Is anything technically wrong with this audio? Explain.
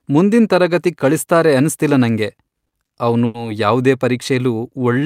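Yes, there are two timing faults in this speech.

From 2.35 to 3.36 s there are repeated stalls (stutter). Packets arrived late, so the jitter buffer ran dry five times and the receiver extended the preceding sound to cover each gap. The gaps total 190 ms, the longest 90 ms, about a fifth of that stretch. Nothing is lost, but the speech drags and catches.

From 4.61 s to the end there is a jitter buffer slow-down. To rebuild its reserve, the receiver repeated short pitch periods, adding 52 ms. That stretch plays at about 90% speed with unchanged pitch, so the sounds are audibly drawn out.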